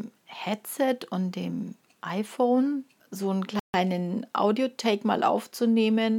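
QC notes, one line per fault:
3.60–3.74 s, playback stall: the audio just drops out mid-flow for roughly 145 ms, a hole of silence, and then carries on. That's long enough to register as a hiccup instead of a glitch. The likely cause is the player running dry on data or its thread getting held up briefly, so nothing reached the output until it caught up.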